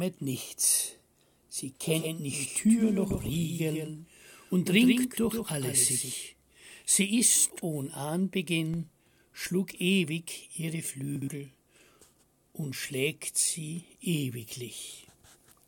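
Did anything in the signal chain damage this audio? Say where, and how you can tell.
Yes. From 1.83 s to 6.11 s a full-band duplicate of the sound trails the original by roughly 150 ms, about 5 dB quieter. It is clean, with no decay or room colour, and it starts and stops abruptly. This is a doubled audio track, likely from a second, slower capture path in the driver or buffer stage being mixed back in. On a waveform each transient is followed by a smaller copy of itself. On a spectrogram every onset shows a ghost at a fixed offset.

At 7.50 to 7.62 s and again at 11.16 to 11.28 s, two 60 ms chunks play swapped: the earlier one arrives one chunk late. These chunks out of order point to the network or storage buffering stage. Each spot sounds briefly jumbled, with three hard joins. These show as sharp vertical lines on a spectrogram and as waveform discontinuities.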